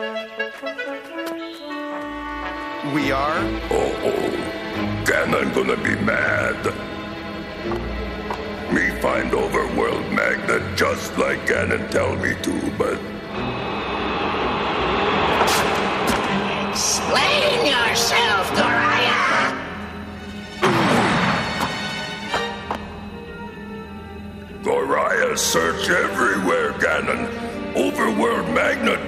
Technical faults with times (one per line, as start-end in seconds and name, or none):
none